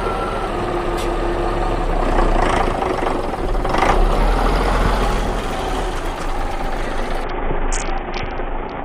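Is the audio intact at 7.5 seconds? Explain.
No. From 7.24 s to the end of the clip at 8.84 s, the audio suffers a Bluetooth SBC bit pool drop. The link appears to have fallen back to a far smaller bit budget, which fits a cut from a bit pool of 31 to 6, near 55 kbps. The upper sub-bands receive almost nothing, so the treble goes dull, while the remaining bands are coarsely quantised and a gritty noise rides over the sound.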